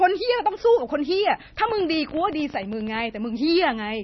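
Speech with heavy MP3 compression throughout: nothing survives above 5.9 kHz, and the watery, swirling texture fits a low bitrate around 24 kbps. From 1.69 to 3.01 s, a train of clicks, about 17.6 per second at an uneven pace, roughly twenty in all, peaks about as loud as the speech, likely interference or a faulty connection.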